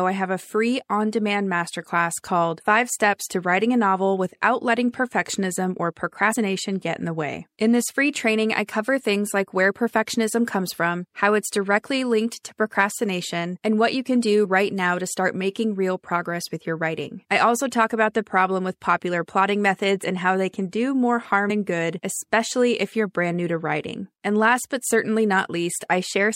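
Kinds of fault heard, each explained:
Compressed frames skipped: Whole compressed frames go missing, so the speech jumps ahead, which fits frames of about 26.1 ms. Joins at 6.31, 14.44, 20.03 and 21.49 s are brief smeared blips, not clicks. After "what you can do" roughly 30 ms vanishes, elsewhere up to about 70 ms.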